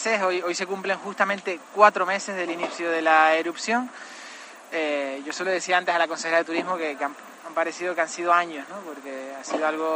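From the start to 2.31 s there is a steady buzz at about 46.9 Hz beneath the sound, while the audio keeps its normal speed and pitch. This is a block size mismatch (truncated): one stage hands over blocks longer than the next stage takes in, so the tail of each block is discarded. Each cut produces the periodic buzz, and a rate of 46.9 Hz fits 1024-sample blocks being written.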